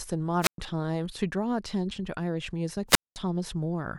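At 0.41 s and again at 2.88 s, the speech hits a wireless microphone squelch dropout. The radio link fades, hiss rises briefly, and the receiver's squelch mutes the output. The holes last about 0.11 s and 0.21 s before the speech returns.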